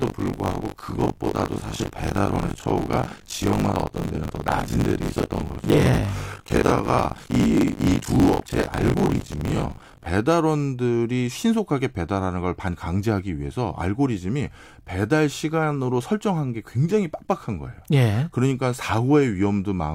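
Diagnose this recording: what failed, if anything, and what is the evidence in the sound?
Buffer tearing in the driver's ring buffer, from 0 to 10.07 s: a 50 Hz rattle on the speech, with roughly 40 percent of each 20 ms period replayed from a lap earlier.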